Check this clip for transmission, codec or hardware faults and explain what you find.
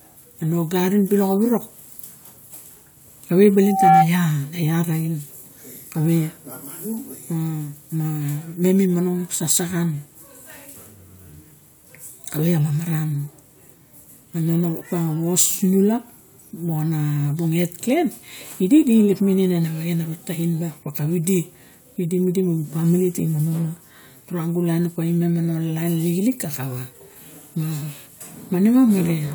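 There is one fault, a loudspeaker feedback squeal from 3.60 to 4.09 s. A microphone was picking up the loudspeaker it was feeding, and at 771 Hz the gain around that loop rose above one, so that frequency kept reinforcing itself on each pass. The result is a single tone that swells over about a third of a second into a squeal around 10 dB louder than the speech, then cuts off at 4.09 s.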